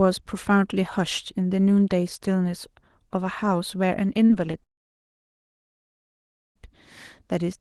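A brief smear at 4.25 to 4.31 s, then a shorter wobble at 4.51 to 4.55 s, mark two short concealed packet losses. About 40 ms and then 20 ms of the call arrived too late for the decoder. The receiver covered each gap by extending the speech just before it and then blended back into the real signal, so the sound blurs rather than breaking.

From 4.63 to 6.57 s the speech cuts out for nearly two seconds. After a momentary trailing continuation it falls to silence, then resumes with that stretch simply gone. The likely cause is a long network dropout: no packets reached the receiver, so its concealment ran out almost at once and the audio was never recovered. The call path, consistent with Opus at around 20 kbps, limits the audio to about 12 kHz throughout.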